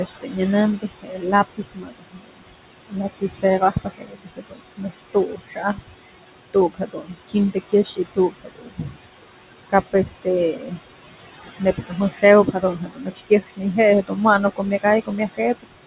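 It's a speech clip with fairly strong room noise sitting only about 11 dB under the talker, heard through a narrowband call path with nothing above 4 kHz, which fits G.711 A-law at 64 kbps. The main problem is noise suppressor artifacts running the whole way through. The suppressor is pulling the background down by about 19 dB, frame by frame, so the noise drops out in the gaps and comes back up under the talking. On top of that there's speech cut by the noise suppressor, where it mistakes parts of the talking for noise and turns them down along with the background. That happens at 0.05 to 0.4 s, 0.78 to 5.9 s, 6.54 to 9.02 s, 9.7 to 10.98 s, 11.6 to 13.64 s and 14.56 to 15.74 s. The drops reach about 16 to 22 dB, and the longest stretch is the one from 0.78 s, with around three seconds affected in total. In those spots, soft consonants and word endings sound swallowed or faint.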